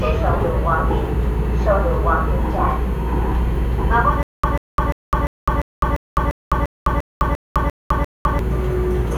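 Stutter with silent gaps runs from 4.23 to 8.39 s in this everyday-sound recording. A 141 ms fragment repeats twelve times, each followed by about 206 ms of digital silence, giving an even 347 ms cycle. The likely cause is a stalled player or stream that replayed its last buffer at each retry, so the audio due in that span is lost.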